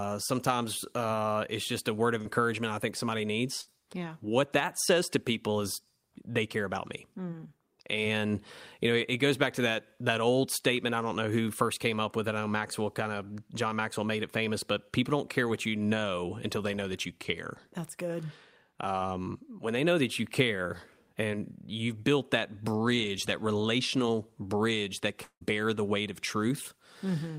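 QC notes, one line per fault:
2.21–2.27 s: short concealed packet loss. About 40 ms of speech never reached the decoder in time. The receiver bridged the hole by extending the preceding sound for roughly 37 ms, then blended back. This leaves a brief smear or wobble.
3.61–3.69 s: burst of packet loss. About 60 ms of consecutive audio was lost or arrived too late to play. The receiver continued the last sound and faded it down across the gap. Speech then resumes further on, with that stretch missing.
25.23–25.43 s: long network dropout. Roughly 180 ms of speech is gone. A continuation of the last sound fades out, and about 80 ms of silence follows before speech returns further on. The cause is likely a network stall in which no audio arrived.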